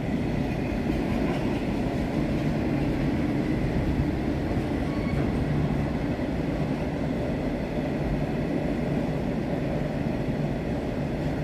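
No technical faults can be heard anywhere in the clip. Nothing in the audio points to a break, a drop or any disturbance at any moment.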